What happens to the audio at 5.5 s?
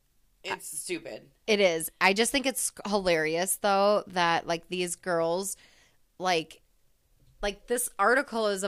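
Nothing goes wrong at 5.5 s; the speech carries on intact through that moment with no dropout, click or distortion.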